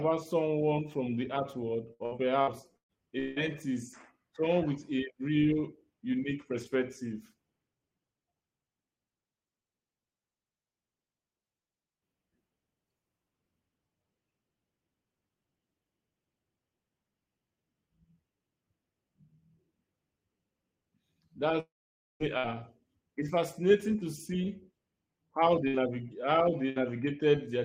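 A speech recording with network-transport faults in five places. Right after "from the art world", from 1.93 to 3.39 s, there is repeated packet loss with a robotic sound. Five gaps chop the sound, the longest about 172 ms. Each is filled by stretching the preceding audio, so roughly a third of that span is synthetic. From 21.60 to 22.23 s the signal briefly smears, then goes silent for about 510 ms before speech resumes with about 600 ms missing. This is likely a long network dropout, where concealment decays to silence once nothing arrives. Short bursts of packet loss follow at 22.38–22.47 s, 25.68–25.77 s and 26.70–26.79 s. Each removes about 60 ms, which the receiver covers with a brief fading continuation of the last sound, heard as a buzz or hiss before speech picks up again.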